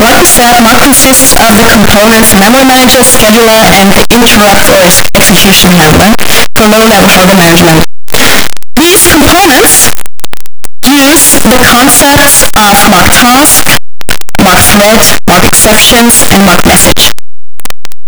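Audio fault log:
throughout, signed and unsigned mixed up: harsh full-loudness distortion, likely 8-bit samples misread, top bit flipped; waveform jumps across its whole range, spectrogram smeared broadband.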